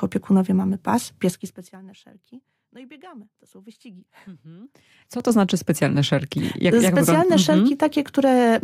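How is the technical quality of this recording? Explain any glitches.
The recording has two zipper-noise glitches in level moves. From 1.21 to 1.77 s the level drops by roughly 25 dB, and from 4.92 to 5.29 s it rises by about the same. Each move is applied in coarse steps, about 4 dB and about 6 dB respectively, at around ten a second with no smoothing. Every step clicks, so you hear a ticking zipper riding on the sound while it moves.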